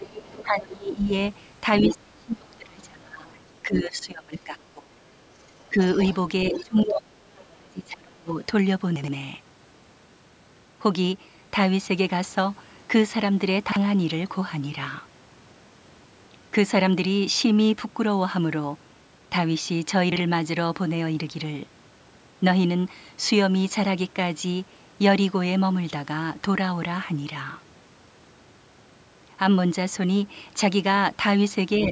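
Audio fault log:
0.00–0.44 s, other side's voice leaking through: a second voice sits about 15 dB under the talker at the very start. This is likely loudspeaker playback of the far end reaching the microphone and surviving the echo canceller.
0.43–8.39 s, speech suppressed in double talk: the talker's level keeps ducking, by up to about 30 dB and for roughly five seconds in total, while the far end talks too. The echo canceller likely could not separate the two and turned both down, leaving dips and dropouts.
1.78–3.45 s and 5.30–7.52 s, other side's voice leaking through: the far-end voice returns much stronger, about 5 dB below the talker in the first stretch and about 10 dB below in the second. This is likely residual loudspeaker echo that the canceller left in, heard as a competing voice.
8.96 s, 13.68 s and 20.12 s, chunks out of order: at each point a 40 ms block plays two chunks late at 8.96 s and one chunk late at the other two. 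The jumble lasts about 0.12 s at 8.96 s and about 0.08 s at the others. The sound is briefly scrambled, and each misplaced block leaves hard joins.
31.78–31.86 s, other side's voice leaking through: a short scrap of the far end comes through about 10 dB below the talker right at the end. It is likely echo the canceller did not fully remove.
31.87–31.92 s, speech suppressed in double talk: the closing fragment dips by about 5 dB for roughly 50 ms. The canceller likely treated overlapping talk as echo and attenuated the talker along with it.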